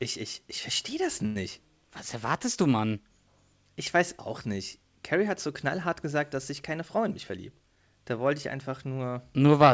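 Just after "ich ich verstehe das", from about 1.26 to 1.37 s, there's a short stall from a late packet. The next chunk of audio hadn't shown up in time, so the jitter buffer ran dry and the receiver filled the gap by stretching the last bit of speech for about 94 ms. When the packet landed it picked up right where it left off, so nothing's lost. You just hear a sound held a beat too long, with a faint buzzy wobble.

Later, after "gesagt dass sich keine", from about 6.97 to 7.90 s, there's a jitter buffer speed-up. The buffer had built up more audio than it wants to hold, so the receiver trimmed lots of tiny pitch-period slices in a row, around a tenth of a second in total. The speech plays at about 109% speed with the pitch unchanged, so that stretch sounds a bit rushed. All of this comes through a WebRTC call path band-limited to 8 kHz.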